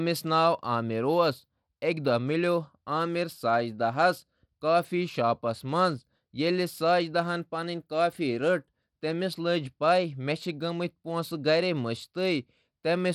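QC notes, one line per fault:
Throughout, Bluetooth SBC compression: plainly audible codec damage on the speech, a gritty, coarse texture from sub-band quantisation, with nothing above 19.2 kHz. This is likely SBC at a small bit pool, consistent with roughly 96 kbps, starving the upper bands.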